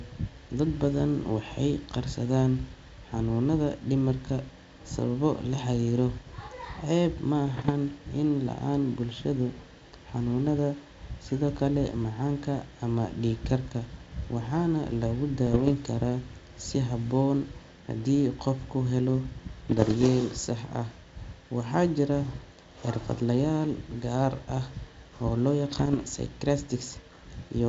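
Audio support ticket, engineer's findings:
Bit errors on an ADPCM link at 7.46–7.71 s, 15.46–15.73 s (after "dhiig karka waxaana lagu"), 19.66–20.07 s, 25.69–26.05 s. Pops, rough bursts, brief level jumps. Flipped bits at roughly 0.5–0.7 percent derail decoder step size and predictor, smearing each hit. G.722 path sounds like full wideband 64 kbit/s mode.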